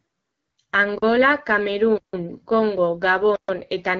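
Throughout, the speech carries the rough, raspy texture of the AMR wideband (HD Voice) codec at a low rate, which fits about 8.85 kbit/s. A spectrogram shows nothing above 7.6 kHz and smeared, noisy upper bands where the codec substitutes shaped noise.

A block of digital silence cuts in at 0.98 to 1.02 s (43 ms, which fits a 2048-sample buffer not filled in time), 1.98 to 2.13 s (156 ms) and 3.36 to 3.48 s (128 ms). Each is a flat line on the waveform and a blank vertical band on the spectrogram.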